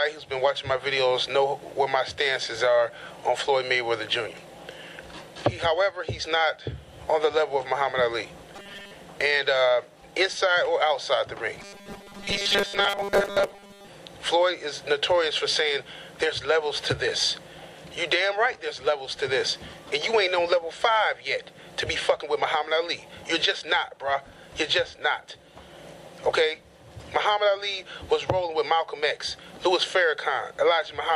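Robotic sound from repeated short buffers appears from 8.56 to 8.94 s and again from 11.61 to 13.88 s, where the audio collapses into a rigid, metallic buzz pitched at 200 Hz. That steady tone points to a segment of about 5 ms being looped. The likely cause is new audio arriving too slowly, so the playback fills each gap by replaying its last scrap while most of the real signal is dropped.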